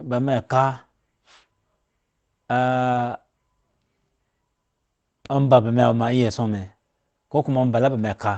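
Two packets in a speech recording carried over an Opus call path were lost around 2.93 to 2.99 s, and the decoder rebuilt about 40 ms from the low-bitrate copies in the following packets. The lost packet rebuilt from error correction leaves no gap, but that stretch sounds rougher and noisier than the coded audio around it, whose bandwidth tops out near 8 kHz.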